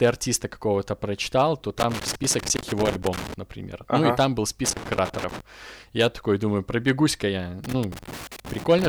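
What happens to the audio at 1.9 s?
At 1.9 s the speech is inside a burst of loose connector crackle running from 1.79 to 3.34 s, just after "прочитал то". A worn contact makes and breaks, chopping the signal into irregular scratching; the waveform shows jagged dropouts and spikes, the spectrogram scattered broadband vertical streaks.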